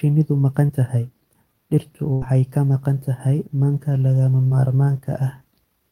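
Packets in this speech recording three times failed to reach the decoder in time, and the receiver covered each hole by extending the preceding sound and then blending back into the real signal. These short concealed packet losses fall at 0.67 to 0.71 s, where about 20 ms was lost and 15 ms was synthesised, and at 4.47 to 4.53 s, where roughly 40 ms went missing and 38 ms was filled. Each is heard as a brief smear or wobble in the voice. A more serious burst of packet loss occurs at 2.13 to 2.23 s, where about 80 ms failed to arrive as a single run. The concealment stretched the last sound across 83 ms while turning it down, so a held buzz or fading hiss stands in for the missing stretch. The speech then jumps forward and resumes on "ka maqan tahay", with the audio between the two points gone.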